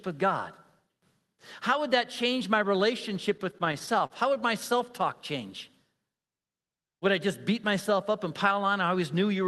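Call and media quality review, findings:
Repeated stalls (stutter), 3.37 to 4.45 s, between "that change my relationship" and "my self talk change". Twelve short holds, the longest 38 ms, about 146 ms in total. Jitter buffer ran dry as packets came late. Receiver stretched the last sound each time. Nothing lost, but the phrase drags. Call path itself sounds normal: top end stops near 12 kHz, consistent with Opus at around 32 kbps.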